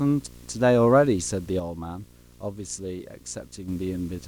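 Video or display buzz runs throughout this speech clip, a 60 Hz field-rate hum with hash above it, roughly 25 dB below the speech, from a screen or video cable coupling into the audio. One channel drops out from 1.60 to 3.68 s: the level falls abruptly by about 6 dB, likely because one stereo side was lost before the mono sum.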